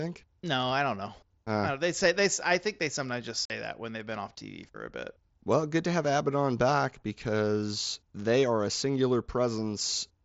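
At 3.45 to 3.50 s, after "think they sometimes just", unconcealed Bluetooth headset packet loss leaves a 45 ms hole. Its abrupt edges cut the speech off before "that when they've been".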